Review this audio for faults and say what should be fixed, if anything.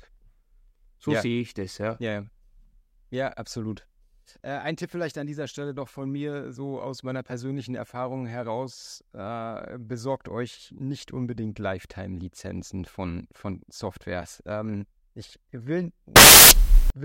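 Samples built from the wrong bytes appear from 16.16 to 16.90 s, right after "ich will". The reader assembles each sample's bytes wrongly, so the rapidly changing low bits dominate and the speech turns into loud, harsh broadband noise. The fix is to check byte order and alignment against the declared format before decoding.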